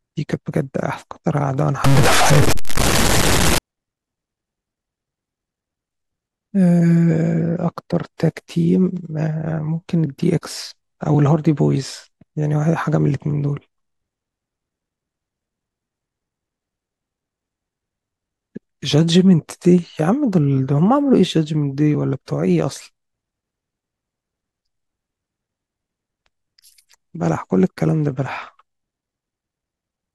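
Speech recording with a burst of harsh, buzzy distortion from about 1.84 to 3.58 s, likely a stuck bit, where one data bit is pinned at a fixed value by a faulty line or converter. Roughly half the samples get shoved off by that bit's weight, a jump somewhere around -10 dBFS, which is big, so the distortion is harsh. Since the bit flips with the sign of tiny values, even the quiet gaps in there fill up with noise.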